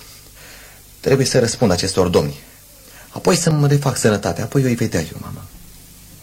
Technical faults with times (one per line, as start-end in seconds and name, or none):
1.52 audio missing between chunks
3.51 audio missing between chunks